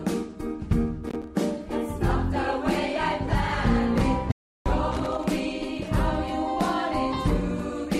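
Two kinds of fault affect this audio. Loose connector crackle appears twice, from 1.07 to 1.28 s and from 4.92 to 5.24 s. Each burst is an irregular scratching crackle lasting a fraction of a second. It comes from a worn or dirty contact that keeps making and breaking as it shifts. That chops the signal into fragments, and any DC on the line turns each break into a pop. Between these bursts there is an audio dropout to silence, from 4.32 to 4.66 s. The sound stops abruptly and returns mid-flow after about 0.34 s. The gap is dead digital silence, with no room tone underneath. Whatever sounded during it is simply missing. The likely cause is a brief loss of the input, such as a momentary disconnect or mute, while recording carried on writing silence.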